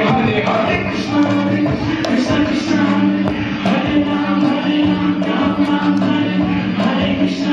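At 3.28 to 3.30 s there is a single loud pop, standing roughly 10 dB above the surrounding sound. It is a sharp, brief burst. The sound carries on underneath it. The likely cause is a sudden voltage pulse from a plug, switch, static or driver glitch.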